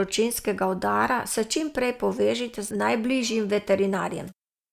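Nothing technical stands out in this short bit of speech, so there's no fault here to point to.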